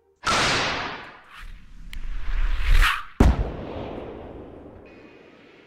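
An electrical switching spike lands at 1.93 s: a single sharp snap, peaking around -20 dBFS, sitting on top of the sound for barely a millisecond. It is likely a nearby switch, motor or static discharge arcing briefly, with the audio line picking up that burst.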